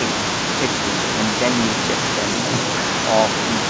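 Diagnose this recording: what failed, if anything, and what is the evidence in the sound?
Nothing failed: the speech came over a WebRTC call path whose wideband coding, consistent with G.722 at 64 kbps, leaves nothing above 8 kHz, and that top-end cutoff is simply the codec at work, with no stage misbehaving.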